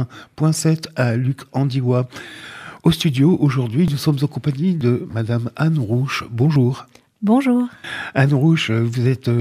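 At 3.88 s there's a small jump in the sound, and the same thing happens at 4.81 s. At 6.56 s there's a slightly bigger skip. There's no gap at any of them, just a splice where a bit of audio is missing: around 10 ms each time at the first two, and roughly twice that at the third. That's likely a dropped buffer (overrun), where the capture side didn't pick up its samples before the hardware overwrote them.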